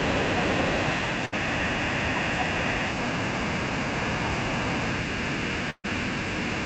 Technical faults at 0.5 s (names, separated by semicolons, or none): none